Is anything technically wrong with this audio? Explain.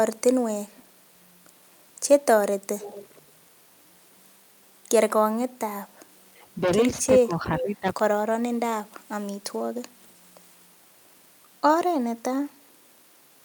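Yes, there are two faults. From 2.79 to 3.22 s there is an echo leak: a delayed copy trails the speech by 441 ms at about 20 dB down. The likely cause is loudspeaker pickup that the echo canceller missed. On a spectrogram it shows as a faint repeat of the harmonic pattern.

Speech suppressed in double talk cuts the speech at 5.96–6.00 s and 6.28–6.32 s, each by around 25 dB. From 7.23 to 7.86 s it dips by about 15 dB for roughly half a second. The likely cause is a canceller ducking both talkers. Waveforms show brief notches in the envelope.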